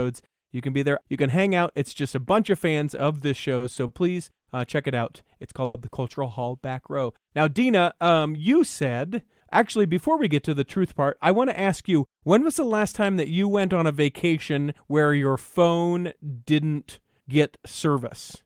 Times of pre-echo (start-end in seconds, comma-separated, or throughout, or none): none